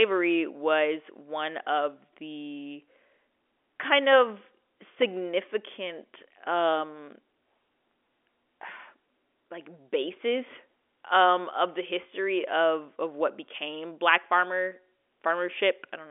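Speech heard over an ordinary telephone line, with nothing technically wrong with it.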